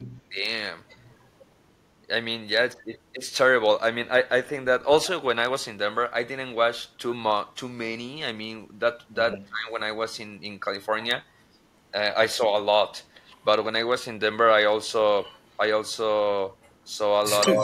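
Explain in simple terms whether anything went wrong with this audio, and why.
Speech suppressed in double talk happens at 0.30–0.36 s, 9.46–9.78 s and 17.48 s to the end. The voice briefly dips or drops out, most deeply around 9.5 s. The likely cause is an echo canceller muting both sides while the two people talked at once.

Echo leak appears at 0.88–1.46 s, 9.32–9.38 s, 13.32–13.44 s, 15.23–15.50 s and 16.62–17.49 s. A faint copy of the voice returns 164 ms late and is loud near the end. This is likely a loudspeaker's sound reaching the microphone and being sent back.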